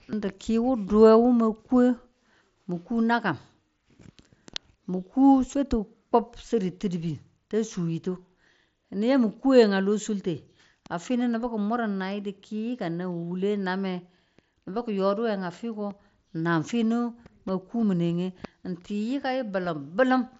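This speech clip has no technical faults. It carries the audio through a Bluetooth mSBC headset codec, so the band stops around 8 kHz and loud sounds pick up a light grain, which fits a link running near 61 kbps.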